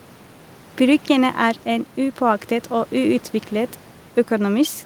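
No technical faults can be heard anywhere in the recording. Some background noise from the room sits underneath the speech, about 27 dB below it, and belongs to the recording itself rather than to anything going wrong in the system.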